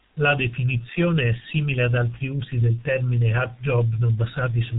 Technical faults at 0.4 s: G.723.1 codec

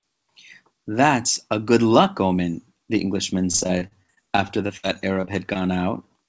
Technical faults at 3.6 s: repeated packet loss (robotic sound)

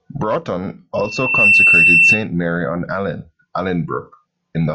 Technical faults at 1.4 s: loudspeaker feedback squeal

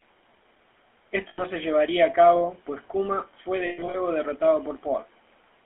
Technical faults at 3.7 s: GSM full-rate codec; lost GSM frames

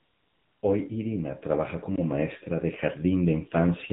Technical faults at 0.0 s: AMR narrowband mobile codec; AMR comfort noise

